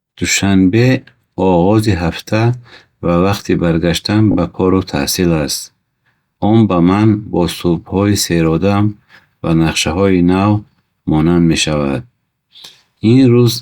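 At 4.31 to 4.35 s, a short slice of compressed speech was sent to the decoder three times in a row, a repeated frames fault. The repeated stretch is about 20 ms long, which fits a single codec frame played twice more than it should be. It is heard as a brief stutter, a tiny catch where the same fragment sounds again. The clip runs 40 ms longer as a result.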